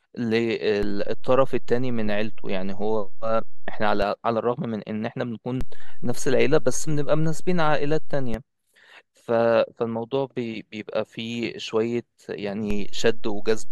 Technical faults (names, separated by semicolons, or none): DC step